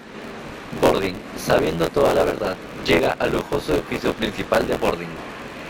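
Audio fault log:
Throughout: buffer tearing. A robotic buzz near 86.1 Hz rides on the speech and stops in the silences. Around a third of every buffer replays audio from roughly 20 ms earlier, hard-joined at both ends, which fits a 512-sample buffer. The steady buffer-rate buzz, present only with signal, separates it from ordinary dropouts.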